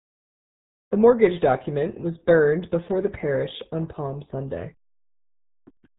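From start to finish the speech carries RealAudio 14.4 codec damage, heavy throughout. Nothing above 3.8 kHz survives, so consonants lose their edge and the voice sounds muffled and gargly, with the coarse, smeared texture that fits a very low rate near 8 kbit/s.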